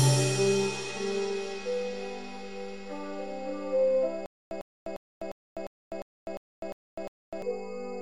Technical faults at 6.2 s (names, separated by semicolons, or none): stutter with silent gaps